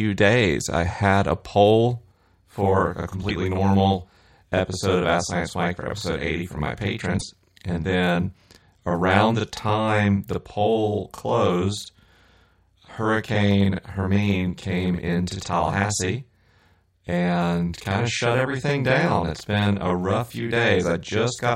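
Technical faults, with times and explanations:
2.11 s to the end, channel delay (doubling): from just after "I had a poll", one channel runs 40 ms behind the other. When the two are summed to mono, the late copy lands as a separate second image at the same level, a tight slapback that doubles every syllable. A delay of a few milliseconds would give a hollow, phasey comb-filter tone instead. At 40 ms the ear separates the copies and hears doubling.
3.28 s to 3.31 s and 7.17 s to 7.23 s, broken MP3 bit reservoir: at each point the audio jumps forward, and the moment after the jump comes out as a short garbled burst or hole lasting one or two frames, which fits MP3 frames of about 26 ms. The likely cause is frames cut from the stream, so the next frame reaches back for reservoir bytes that now belong to a different frame. A clean dropout would just be silence.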